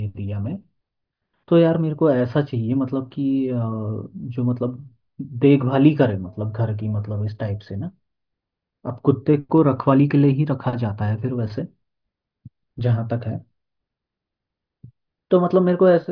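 A speech recording with nothing technically wrong to be heard in it.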